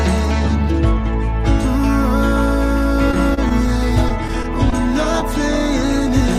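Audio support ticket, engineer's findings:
Repeated packet loss (robotic sound), 3.11–3.67 s and 4.09–4.74 s. Network delivery failed again and again; concealment extended prior audio over holes up to 29 ms and 16 ms. Result: choppy stretches with short pieces missing.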